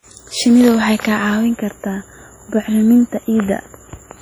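A speech recording, likely passed through WMA compression at a low bitrate around 32 kbps, whose long-block quantisation noise leaves heavy ringing, washy smearing and signal-following hiss throughout.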